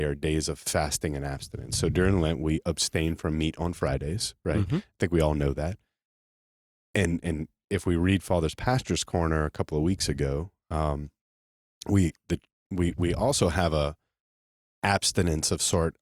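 Nothing in the speech stood out as a technical problem on listening.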